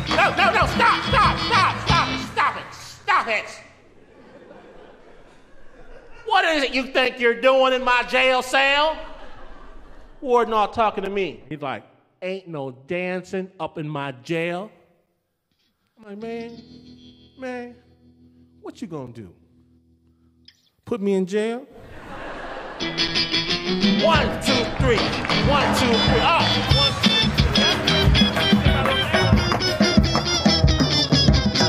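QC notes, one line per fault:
3.04, 7.05, 11.06, 15.06, 19.07, 23.08, 27.08 and 31.09 s: gap between chunks. The audio was delivered in 4-second chunks and each join left roughly 7 ms of silence, as if the player started every chunk slightly late or padding sat at each boundary. Nothing is missing, but the sound stops dead and restarts at each join, so there is a tiny hard-edged hole every 4 s, a regular pattern rather than a random dropout.
10.71 to 14.27 s: de-emphasis applied wrongly. A treble-cut filter intended to reverse pre-emphasis was applied to material that never had it, or a second time. The response tilts smoothly downward with frequency, about 10 dB lower at 10 kHz than at 1 kHz, so for these few seconds the sound goes dull and muffled, losing its air and crispness. It is a gradual slope, not a sharp cutoff, and it ends at 14.27 s.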